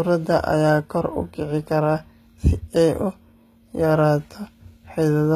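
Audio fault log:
Throughout: HE-AAC compression, likely the cause of the plainly audible coding damage here. The speech has a treble that sounds bright but synthetic, and nothing sits above 14.9 kHz. Only the lower spectrum is truly coded. The top is rebuilt by copying lower bands upward under a coarse envelope. That copied treble does not match the real harmonics, so the upper range sounds gritty and artificial. The plainly audible damage fits a bitrate near 20 kbps.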